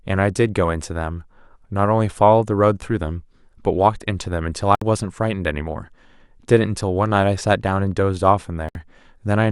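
Speech with two brief digital broadcast dropouts, at 4.75 to 4.82 s and again at 8.69 to 8.76 s. Each time the audio mutes for roughly 64 ms and then resumes further along in the programme. The material that fell in each gap is gone. The receiver lost the digital signal or rejected corrupted frames and stayed silent until valid frames returned, and the length of each hole fits two lost frames.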